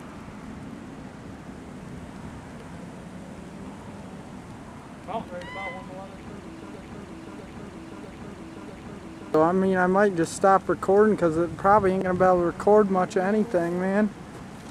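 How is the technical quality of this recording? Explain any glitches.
The recording has one clear glitch: a broken-record loop. It runs from 6.76 s to 9.34 s. A fragment about 0.65 s long plays four times, back to back, with identical content each time. The repeats join without a gap, so the sound stutters in a fixed rhythm. This likely comes from a stalled player, encoder or stream that kept resending the last fragment it held. The audio that belonged in those seconds is missing.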